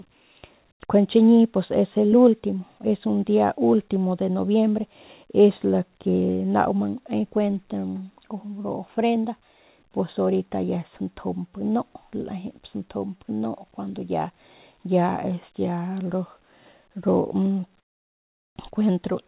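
At 0.72 to 0.80 s and again at 17.80 to 18.56 s, comfort noise in place of the background, likely from discontinuous transmission, drops the background by about 18 dB and then about 25 dB. It appears as a flat, textureless band on the spectrogram, capped near 4 kHz by the G.711-like call path, and as a thinned waveform.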